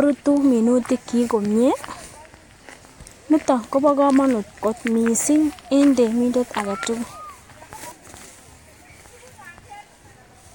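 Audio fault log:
No fault appears in this audio fault log for the speech clip.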